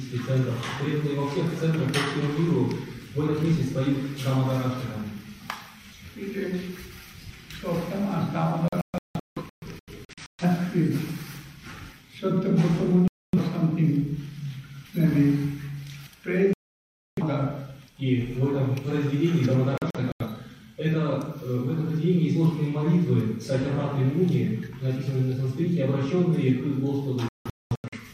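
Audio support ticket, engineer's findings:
Digital broadcast dropout, five hits: 8.68–10.44 s (scattered holes, about 0.94 s lost, longest 0.17 s), 13.08–13.38 s, 16.53–17.23 s, 19.78–20.25 s (brief broken gaps), 27.29–27.98 s. The receiver is losing the signal or failing frame checksums, then muting until good frames return. Whatever was sent during the gaps is gone.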